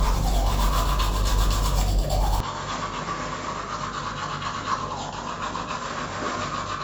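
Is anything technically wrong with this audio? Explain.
Yes. From 2.40 s to the end, the sound abruptly turns duller and quieter, with nothing above about 7.6 kHz and a level drop of roughly 10 dB, and no gap at the change. This is likely an input switched to a poorer device, whose narrower band, different gain and own hiss, sitting roughly 35 dB under the signal, take over together. A simple filter or fade would alter the tone or level alone, without bringing in a new noise floor.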